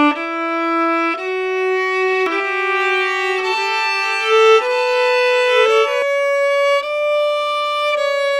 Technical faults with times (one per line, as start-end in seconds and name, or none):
2.26-6.02 doubled audio track